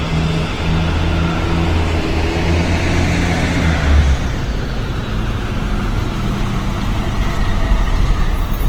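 All the way through, the sounds come out grainy, rough and noisy. That's likely Opus compression starved of bits, fitting about 16 kbps, patching bands with noise.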